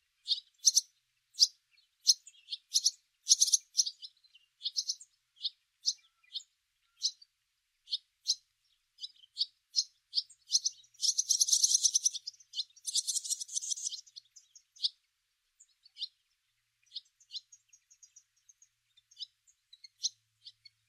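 No dropouts, distortion, timing slips or level problems turn up anywhere in the recording.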